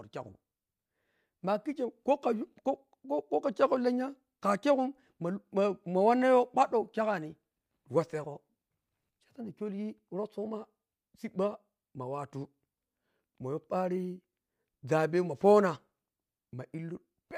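From 12.92 s to the end of the speech, sample clock jitter sets in: the converter's clock wanders, so each sample is taken a little early or late, on the order of a microsecond or two. Because the timing error turns into amplitude error in proportion to how fast the waveform is changing, a faint hiss and graininess of around -45 dB relative to the signal rides on louder and brighter syllables and drops away in the pauses.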